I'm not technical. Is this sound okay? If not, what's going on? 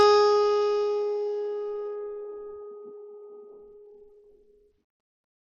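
No. Throughout the music, the treble is missing above 12 kHz, and a gritty, grainy layer rides on what remains. That pattern points to Bluetooth SBC compression as the likely cause: the link squeezes the audio hard and discards the highest frequencies.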